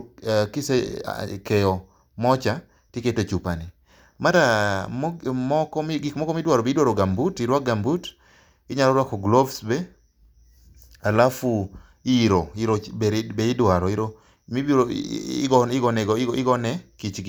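Speech, with no audible technical faults anywhere.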